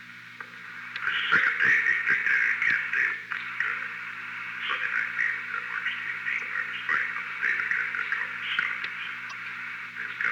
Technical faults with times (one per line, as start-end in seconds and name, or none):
6.38-6.41 damaged data in a compressed stream
9.29-9.33 damaged data in a compressed stream